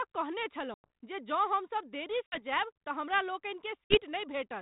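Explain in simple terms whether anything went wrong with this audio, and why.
Packet loss on an ADPCM call: chunks of the call went missing at 0.74, 2.26 (after "हम सब देरी") and 3.85 seconds, leaving brief silent gaps. The decoder then lost track, so the speech comes back and briefly sounds off.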